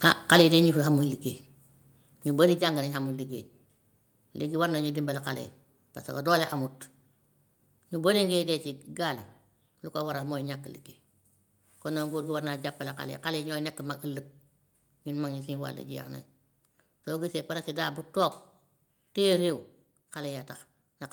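Right from 0.05 to 0.57 s there's microphone overload: the loudest peaks run about 9 dB past the converter's limit and get their tops sheared off, a couple of percent of samples in all, giving that harsh, crackly edge. The likely cause is the input volume being set too high. Then the microphone volume gets stepped down three times, at 0.41 s by about 3 dB, and at 1.41 s and 2.58 s by about 4 dB each. The speech and the background both drop suddenly in level each time, most likely the call software pulling the input gain back after the clipping.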